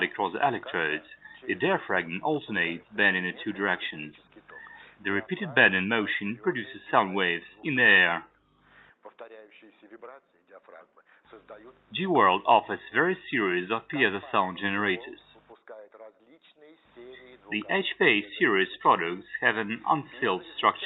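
No technical faults can be heard anywhere in this audio. It has passed through a call codec on a normal call path, and the high frequencies stop at about 8 kHz, which fits an Opus stream at a moderate bitrate of around 32 kbps.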